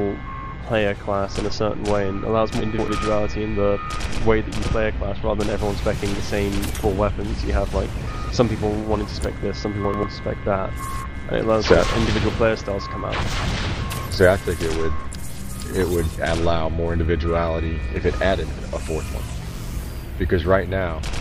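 At 2.60 to 2.88 s and again at 9.85 to 10.03 s there are chunks out of order: a roughly 93 ms block lands late, two blocks late the first time and one the second, so the sound briefly jumbles.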